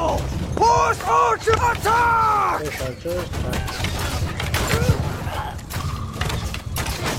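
At 3.49 s a brief burst of damaged data in a compressed stream lasts about 50 ms: corrupted bytes make the decoder misread frames and hunt for the next valid header, producing a short disturbance in the sound.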